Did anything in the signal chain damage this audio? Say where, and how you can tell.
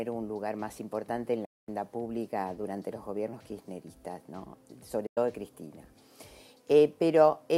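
Yes. A digital broadcast dropout occurs at 1.45 to 1.69 s and again at 5.06 to 5.18 s. Each time the sound fades out within 8 ms, stays silent, then resumes later. At reception, the receiver muted until valid frames returned, so that audio is lost.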